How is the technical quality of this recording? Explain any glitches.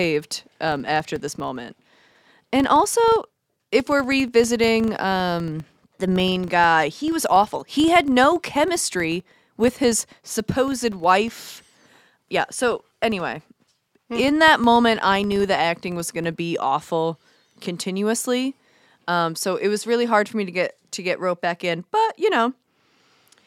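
The first 16.43 seconds of this speech carry a steady low buzz at about 25 Hz, a rapid train of ticks that grows louder when the speech is louder and fades in quieter passages. It stops at 16.43 s. This is a filter restarted on every block: the filter discards its internal memory at each block boundary and begins again from silence, so every block opens with a tiny transient. Twenty-five of these per second suggests blocks of about 40 ms.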